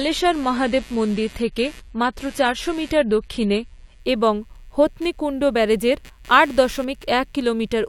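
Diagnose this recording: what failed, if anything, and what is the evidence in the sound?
A faint buzzing, chirping grit runs under the speech for the whole recording, sitting roughly 30 dB below it and pulsing at around 150 Hz. It rises and falls with its own rhythm rather than with the speech, which points to computer activity noise in the analogue wiring. Load changes in the processor, graphics card or mouse shift the shared ground that the audio circuit references, and those current swings leak into the signal path.

For the first 4.0 s the speech sounds dull and smeared, with nothing above 14 kHz and stronger codec artefacts. At 4.0 s the treble and clarity return abruptly, with no gap. This is an adaptive stream starting at a low bitrate, a fault at the network and codec stages. The player opened on a cheap rendition so it could begin quickly, which fits an AAC-LC stream near 32 kbit/s. 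Once it had measured the connection, it switched to a better one of about 96 kbit/s.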